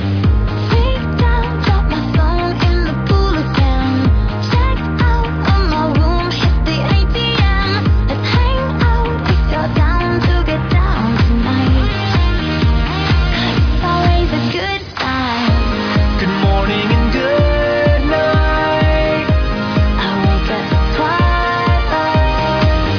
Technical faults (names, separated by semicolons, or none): none